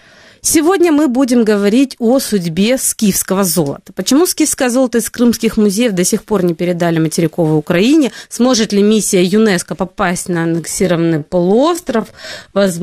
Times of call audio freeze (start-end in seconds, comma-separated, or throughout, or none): none